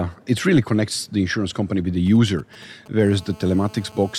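A short speech recording picks up interference from a nearby 2G handset in two stages. From 2.07 to 3.03 s there are GSM signalling bursts: clusters of brief buzzes in a galloping dit-dit-dit rhythm, sitting well below the speech, at roughly a quarter-hundred decibels down. The phone is transmitting only intermittent groups of bursts as it signals to the network, and the audio circuitry rectifies the radio pulses. Each cluster buzzes at about 217 Hz, the GSM frame rate. From 3.04 to 4.14 s this turns into a continuous GSM phone buzz, a hard, raspy tone at 217 Hz rich in harmonics and about 25 dB below the speech, with no relation to what is being said. By then the handset has entered a call and transmits a burst every frame, so the rectified pulses form an unbroken buzz that holds nearly steady until 4.14 s.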